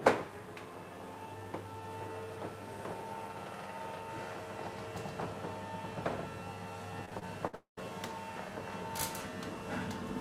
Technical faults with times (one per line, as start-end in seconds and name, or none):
7.05-7.55 repeated packet loss (robotic sound)
7.55-7.79 long network dropout